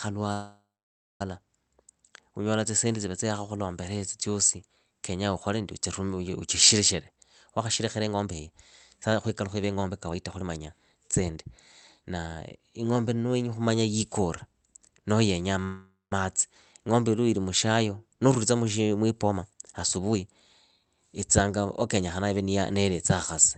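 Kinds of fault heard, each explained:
Call audio freeze: the speech stalls, the last sound buzzes out into silence, then resumes where it stopped, likely from packets held up, near 0.3 s and after "noho yenyaa".
Jitter buffer speed-up: the buffer trims tiny pitch-period slices to catch up, so speech rushes 10 to 27 percent faster at unchanged pitch, in five stretches from 7.1 to 22.6 s.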